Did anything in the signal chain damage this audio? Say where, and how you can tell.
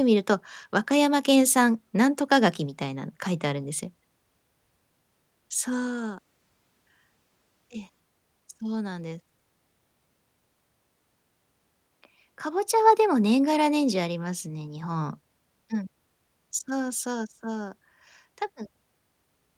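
No, nothing in the chain audibly damaged this speech.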